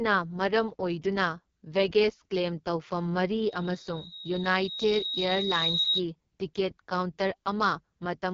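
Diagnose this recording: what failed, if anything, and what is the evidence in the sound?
The codec stage is the problem throughout. The speech has that rough, raspy grain you get from AMR wideband (HD Voice) pushed to its floor, and the damage is heavy. Nothing reaches above about 7.4 kHz, and the top band sounds like hiss rather than real detail. That fits the lowest AMR-WB mode, around 6.6 kbit/s, where the pulse-driven vocal tract model has too few bits to track the voice cleanly.

From 3.46 to 6.03 s there's a loudspeaker feedback squeal at 3.8 kHz, so this failure sits in the acoustic path between the playback speaker and the mic. You can hear a single tone creep in and swell over roughly two seconds until it sits a few dB above the speech. At that one frequency the loop gain went past unity and the tone kept feeding itself until it stopped at 6.03 s.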